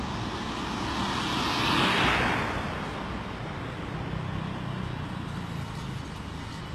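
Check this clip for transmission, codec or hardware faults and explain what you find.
One codec fault runs through the whole clip: the audio sounds like HE-AAC compression, most likely at a very low bitrate, roughly in the region of 16 kbps. The damage is plainly audible. Only the lower spectrum is truly coded, and the treble is rebuilt by copying lower bands upward under a coarse envelope, so its harmonic detail doesn't match the real sound. The top end sounds synthetic and gritty. A spectrogram would show a hard ceiling at 12.3 kHz with nothing above it, and repeated, blocky-looking patterning in the upper bands rather than natural detail.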